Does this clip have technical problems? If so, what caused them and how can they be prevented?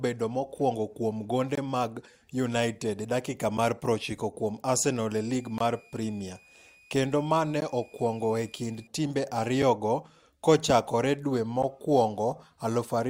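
Yes. Gaps between stream segments silence the speech at 1.55 to 1.58 s after "mokwongo kuom gonde", at 3.58 s after "e dakika", and at 5.58 to 5.61, 7.60 and 11.63 s. They last about 8 to 22 ms and fall on a roughly 2-second grid, which fits segment timestamps that don't quite meet. Unlike a dropout, nothing is lost; silence is inserted. Stitching segments on continuous timestamps prevents this.

A switching supply whistle runs from 5.21 to 8.87 s at about −30 dB, drifting between 2.35 and 2.5 kHz. That drift separates it from a steady interference tone. Filtering or shielding the power supply, or using a linear supply, prevents it.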